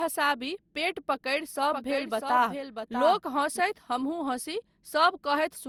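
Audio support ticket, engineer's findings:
Generation loss, throughout. Swirly, smeared, hollow speech. Attacks blurred. Worse than one lossy pass would sound. Likely cause: repeated decode and re-encode, around four passes, each quantising on a shifted frame grid. Character suggests Opus near 64 kbit/s.

Doubled audio track, 1.72 to 3.60 s. A second full-band copy trails by around 0.7 s, roughly 5 dB quieter. No decay, no room colour. Starts and stops abruptly. Likely cause: a slower second capture path or an edit holding two copies out of step.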